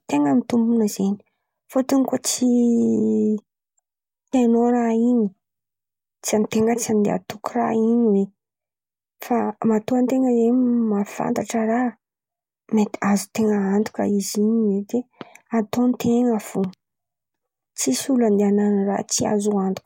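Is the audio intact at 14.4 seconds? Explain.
Yes, the speech at 14.4 seconds is intact, with no audible fault at that moment.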